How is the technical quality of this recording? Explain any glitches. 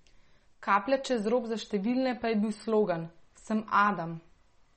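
The quality is poor: audible compression damage runs through the whole speech recording.

MP3 compression, most likely at a low bitrate of around 33 kbps, affects the entire clip. Short of bits, the encoder discards everything above about 8.4 kHz and drops weak frequency components, which switch in and out between frames. The speech sounds dull, watery and swirly, and s sounds lose their crispness. A spectrogram shows a hard ceiling near 8.4 kHz, with speckled, flickering gaps in the detail beneath it.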